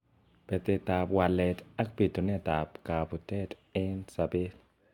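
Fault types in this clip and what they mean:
Generation loss: throughout the speech, the sound is swirly and hollow, with smeared consonant attacks and a hard ceiling at 17 kHz. The likely cause is repeated lossy coding: each decode and re-encode quantises the signal again on a shifted frame grid, so noise and spectral gaps pile up. The character points to AAC-LC around 96 kbit/s applied about three times, sounding worse than one pass at that rate would.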